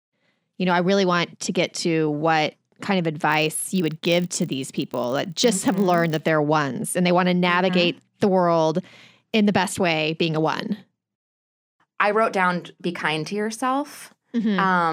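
From about 3.3 s, right after "to what kind of", the speech picks up a buzz at 50 Hz that runs until about 6.31 s, just before "ones and they want". That's a filter restarted on every block: it drops its memory at each block boundary and starts from zero, so every block opens with a little click. Those clicks repeat fast enough to merge into a buzz that gets louder and softer with the speech, which fits 20 ms blocks.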